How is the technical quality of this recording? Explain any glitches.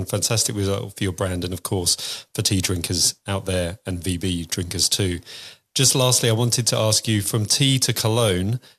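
No technical faults turn up anywhere in the recording. There are no glitches to explain.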